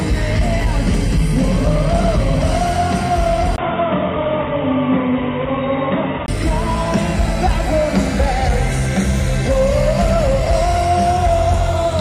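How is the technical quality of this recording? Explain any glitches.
The recording has one clear glitch. From 3.56 s to 6.28 s the sound turns dull and boxy, with nothing above 3.8 kHz, then clears up again. A gap of about 20 ms marks the switch, which likely means the input switched to a poorer device, a narrower-band microphone or headset profile, and back. Unlike a codec bandwidth drop, the loss comes with a brief silence, while the level stays much the same and the new background noise is faint.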